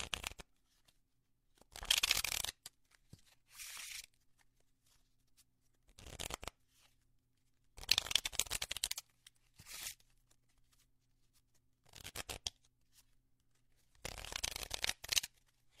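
AAC frame loss with concealment at 8.69 to 8.77 s: about 43 ms of coded audio went missing, which fits a single lost frame. The decoder patched the gap from the last good spectrum, leaving a brief smeared, noisy or phasey blur.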